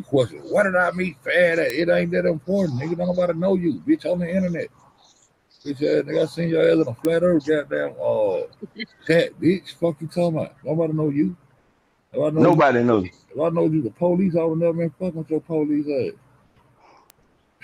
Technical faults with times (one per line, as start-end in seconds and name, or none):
1.70 bit error spike
7.05 bit error spike
12.53 bit error spike
17.10 bit error spike